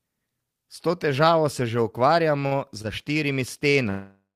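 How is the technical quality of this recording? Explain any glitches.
The recording has three network-related playback faults in its second half, all of them stalls where the receiver ran out of audio and filled time rather than dropping anything.

From 2.39 to 2.86 s, right after "to težavo se že" and leading into "za štirimi", there are repeated stalls (stutter). Packets arrived late or too slowly, and the jitter buffer emptied four times in under half a second. Each time, the receiver extended the last sound until data returned. About 106 ms was filled this way, the longest gap 51 ms, roughly a quarter of that stretch. Nothing is lost, but the speech drags and stutters.

From 3.70 to 3.75 s, after "za štirimi", a short stall from a late packet occurs. One packet missed its playout time, so the buffer ran dry and the receiver held the last sound for 35 ms until the packet arrived, then resumed from the same point. 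No speech is missing. The effect is a briefly prolonged sound with a faint buzz or dip, and everything after it is pushed 35 ms later.

From 3.89 s to the end of the clip, the audio stops progressing and turns into a fading continuation of the last sound, settling into about 120 ms of silence. This is a call audio freeze, likely caused by packets held up in transit until the jitter buffer emptied. The receiver padded 460 ms, so the sound that would follow never arrives before the clip ends.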